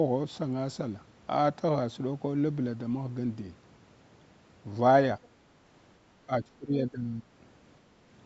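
From 6.25 to 7.31 s the speech dips by roughly 20 dB, likely speech suppressed in double talk, with the echo canceller treating the talker as echo. The waveform envelope sags, and the spectrogram, capped at 8 kHz, fades there.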